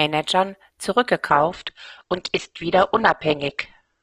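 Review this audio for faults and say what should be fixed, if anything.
From 1.28 s to the end, the speech suddenly loses its treble, with nothing above 8.2 kHz, and turns thin with no gap. This is an adaptive stream at a lower bitrate, consistent with the player stepping down from about 64 to 12 kbit/s Opus when the connection slowed. Buffering further ahead, or setting a higher minimum bitrate for the stream, would prevent the drop.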